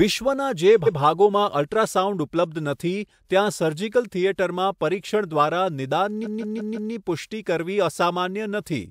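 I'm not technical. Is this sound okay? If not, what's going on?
No, there's a glitch called repeated frames. The file stores sound in small chunks, and some chunks got saved more than once, so the player plays the same bit again. You'll hear a quick stutter at 0.85 to 0.98 s, where a 128 ms slice repeats once. It happens again at 6.23 to 6.91 s, where a 170.7 ms slice plays four extra times, making the speech skip in place and adding about 0.68 s to the clip.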